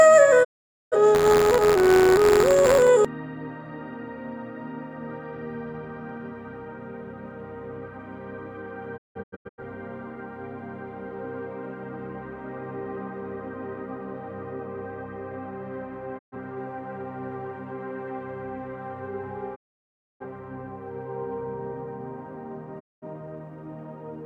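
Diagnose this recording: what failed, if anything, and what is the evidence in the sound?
At the reception stage, the receiver lost the digital signal or got frames that failed their checks, and muted until clean frames returned. Each digital broadcast dropout is a quick 20 ms fade to silence, at 0.43 to 0.96 s, 16.17 to 16.36 s, 19.54 to 20.25 s and 22.79 to 23.06 s. From 8.96 to 9.63 s the cut breaks into several short holes, the longest about 0.17 s. The sound resumes later in the programme, and what was sent during the gaps is lost.

In the driver or buffer stage, the writing side and the hardware read pointer of a ring buffer slipped and crossed inside each period, causing buffer tearing from 1.14 to 2.89 s. A small slice of every buffer carries audio from about 50 ms earlier, with hard joins on both sides. This produces a steady robotic buzz at 86.1 Hz, present only while there is signal, which fits a 512-sample buffer.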